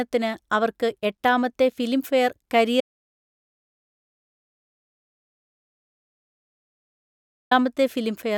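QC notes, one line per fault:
2.81 to 7.51 s, audio dropout to silence: Just after "അവർക്ക് എട്ടാമത്തെ ഫിലിംഫെയർ" the speech stops mid-flow and the track falls to silence. No room tone or hiss remains. About 4.7 s of speech is lost before the signal returns abruptly. The input was likely cut off, through a disconnected device, a failed link or a mute, while the recorder kept writing silence.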